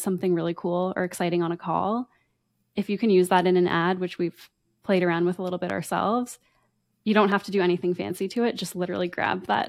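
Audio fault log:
5.70–5.72 s and 7.32–7.34 s, loud pop: a brief voltage pulse, likely from a switch, plug or static, adds a single sharp pop each time, roughly 10 dB then 5 dB above the speech.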